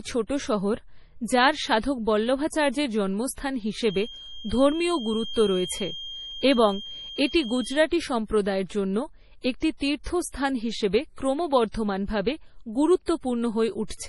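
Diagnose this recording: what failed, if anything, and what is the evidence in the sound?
The codec stage likely failed here: the speech went through MP3 compression with far too few bits, which fits a rate near 32 kbps. The damage is heavy throughout. Nothing survives above 11.5 kHz, and weak frequency lines drop in and out between frames, giving a watery, swirling texture.

A loudspeaker was feeding back into the microphone, with the loop gain sitting just short of runaway, and that is the likely cause of a feedback whistle from 3.77 to 7.90 s. A single-pitch 3.2 kHz tone rings behind the speech, roughly 15 dB below it, swelling and fading slowly, and never builds into a howl.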